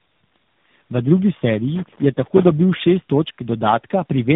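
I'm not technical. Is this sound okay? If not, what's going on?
No. The call passed through three phone-network speech coders in a row, a case of tandem speech coding, each squeezing an already squeezed copy. The voice sounds rough, muffled and warbly throughout, with nothing above about 3.8 kHz.

From 1.75 to 2.53 s there is loose connector crackle: a worn or dirty contact somewhere in the cabling kept touching and losing touch, chopping the signal. For those three-quarters of a second you hear an uneven burst of scratchy crackling.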